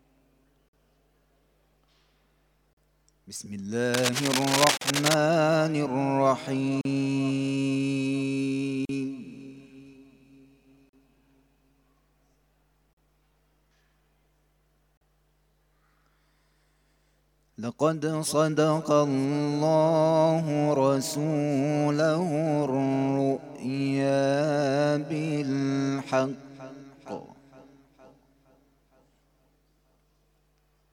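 At 0.69 s the first gap at a join of encoded pieces opens: a 47 ms silence with edges smeared by the codec, after which the sound resumes where it stopped. The same dropout recurs at 2.73 s, then 40 ms long. The two-second spacing points to separately encoded segments joined without trimming the encoder's start-up delay and last-frame padding, so each seam leaves a short hole.

From 3.94 s to 5.15 s a dense, uneven rasping sits over the audio at roughly the same level as the sound itself. This is cable scratch noise, likely from a worn lead, connector or control being moved, so its contact resistance jumps erratically and injects irregular noise bursts. It is heard as scratching lasting just over a second, and it overlaps the next join gap.

The join gaps continue every 2.0 s, each 40 ms long, at 4.77 s, 6.81 s, 8.85 s, 10.89 s, 12.93 s and 14.97 s. Every one is the same brief silence, with the sound picking up directly afterward.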